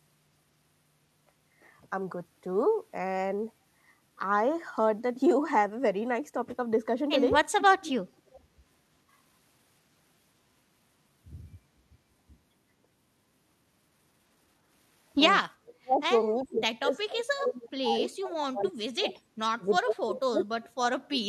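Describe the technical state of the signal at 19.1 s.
At 19.1 s you're right at the tail of a stretch of speech suppressed in double talk, running from 16.33 to 19.2 s. The level dips in and out, adding up to about two seconds of lost or thinned speech, and at its worst it drops by something like 35 dB. The likely cause is an echo canceller that couldn't tell the local talker from loudspeaker echo while the far side was also talking, so it ducked everything together.

Overlapping that, from 19.1 to 19.14 s, there's a brief echo leak: a quick scrap of the talker's own voice coming back 391 ms late, sitting roughly 20 dB under the speech. It's only about 40 ms long, so it comes across as a faint ghost. That's likely loudspeaker pickup on one end that its canceller didn't fully remove, so a bit of it got sent back.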